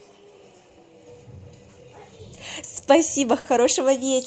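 Clock drift between sender and receiver runs through the whole clip: the sender's clock runs roughly 4 percent slow, so the receiver's buffer keeps draining and timing hiccups recur unevenly. From 0.18 to 2.80 s, repeated timing corrections play the sound at 96 percent speed, stretching it by roughly 150 ms. On a spectrogram, syllables and formant tracks look slightly elongated, with small irregular seams. At 3.40 s, a short stall from a late packet empties the buffer, and the last sound is held for 50 ms with a slight buzz or dip before continuing. On the waveform it looks like a brief repetitive, flattened stretch, and on the spectrogram like frozen horizontal bands.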